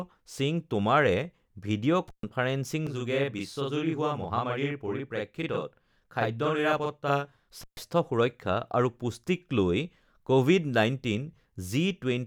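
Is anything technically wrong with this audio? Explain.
Yes, the speech has three faults of two kinds.

Intermittent contact at 2.08 to 2.23 s and again at 7.61 to 7.79 s: a loose connection opens for about 130 ms each time, so the sound drops out, crackling at the edges and leaving faint hiss.

Channel delay (doubling) from 2.87 to 7.49 s: one channel runs 42.67 ms late, which fits a 2048-sample buffer, and the mono sum makes the speech sound doubled, with a slap-like echo at equal level.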